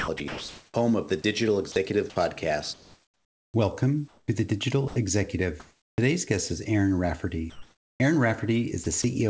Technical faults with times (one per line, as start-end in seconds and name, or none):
0.00-5.98 sound chopped by the voice detector
7.50-8.00 comfort noise in place of the background
8.84-9.04 sound chopped by the voice detector